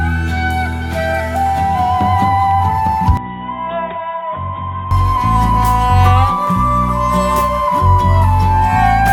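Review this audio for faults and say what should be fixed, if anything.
From 3.17 s to 4.91 s the music turns dull and boxy, with nothing above 3.8 kHz, a faint new noise floor, and roughly 10 dB less level, likely from the input switched to a poorer device. On a spectrogram, everything above 3.8 kHz vanishes abruptly for that span. The waveform envelope visibly shrinks, with no silent gap at the switch. To prevent this, lock the recording input to one device and disable automatic device or profile switching.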